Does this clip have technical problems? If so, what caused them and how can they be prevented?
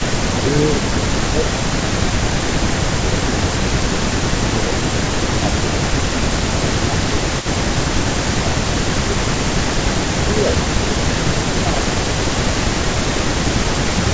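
Yes. An echo leak runs through the whole clip: a delayed copy of the speech, about 0.45 s late and about 10 dB quieter. The far end's echo canceller likely failed to remove its loudspeaker's sound. A better-tuned echo canceller, or a headset at that end, would prevent it.

Speech is suppressed in double talk at 0.01–3.91, 4.37–4.85, 5.38–7.78, 8.26–9.22, 10.26–10.97, 11.34–11.87 and 12.33–14.0 s. Levels dip by about 10 dB, and by about 5 dB at 10.26 s. The canceller likely confused talker and echo and ducked both. Better double-talk detection, or less overlapping speech, would prevent it.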